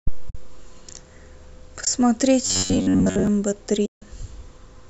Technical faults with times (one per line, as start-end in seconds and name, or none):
0.29-0.35 AAC frame loss with muting
1.84-1.87 AAC frame loss with muting
2.46-3.27 robotic sound from repeated short buffers
3.85-4.02 AAC frame loss with muting